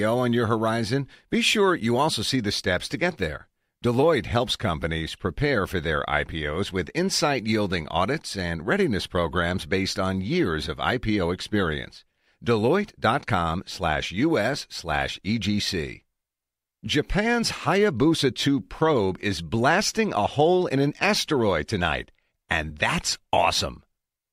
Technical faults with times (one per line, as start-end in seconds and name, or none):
none